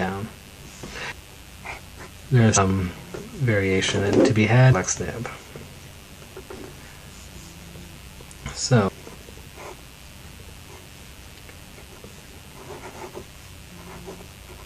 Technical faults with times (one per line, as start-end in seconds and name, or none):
0.00-14.65 mains buzz
2.56-2.58 damaged data in a compressed stream
8.87 damaged data in a compressed stream